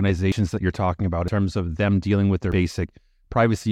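At 0.32 s, 1.28 s and 2.52 s, the speech jumps ahead with no gap. Each is likely a dropped buffer (overrun), skipping roughly 40 to 100 ms.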